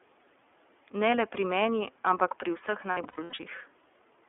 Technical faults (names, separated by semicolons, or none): iLBC codec; lost iLBC frames